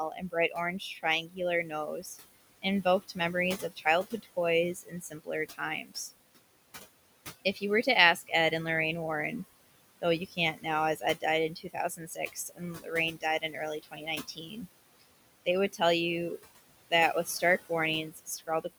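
Noise suppressor artifacts run the whole way through: the room noise, sitting about 15 dB under the speech, gets pulled down by about 20 dB between phrases. The suppressor also mistakes parts of the speech for noise and cuts speech from 0.1 to 6.11 s, 7.54 to 8.52 s, 10.0 to 15.81 s and 16.42 to 18.65 s, dipping it as much as about 21 dB. Around two seconds get swallowed in each of the longer stretches, and only brief bits in the shorter ones.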